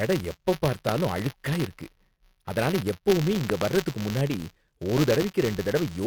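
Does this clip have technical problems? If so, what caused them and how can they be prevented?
Yes. Buffer tearing runs throughout the speech: a steady 188 Hz rattle, fitting a 256-sample buffer whose writer and reader overlap, splicing in a sliver of audio roughly 20 ms old. On a spectrogram it appears as evenly spaced vertical striations. Keep the writing program well ahead of the hardware read pointer, with a larger buffer or higher thread priority.

Loud pops occur at 0.89 to 0.91 s (one, before "அழுக்கா இருக்கு"), 3.50 to 3.64 s (two, between "அதனால எப்பவுமே" and "வர்றதுக்கு முன்னாடி") and 4.98 to 5.24 s (two, after "வர்றதுக்கு முன்னாடி"). They peak about 15 to 20 dB above the speech, which continues underneath. The likely cause is voltage steps from plugs, switches, static or driver glitches. They show as tall spikes on the waveform and full-height vertical lines on a spectrogram. 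Secure the connections, ground the equipment and avoid switching during recording.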